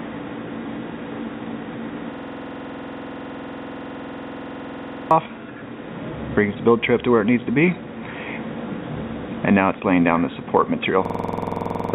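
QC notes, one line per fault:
2.14–5.11 s and 11.05–11.94 s, system hang loop: one 46.44 ms slice repeats at 21.5 Hz, which fits a 2048-sample buffer replaying while the system froze. It sounds like a harsh buzzy stutter and drops about three seconds, then about one second, of sound. The waveform shows identical repeating blocks, and the spectrogram shows evenly spaced vertical stripes, all below the 4 kHz ceiling of the G.711 call path.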